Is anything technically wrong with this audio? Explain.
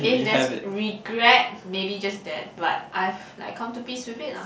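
No, nothing is technically wrong with this audio.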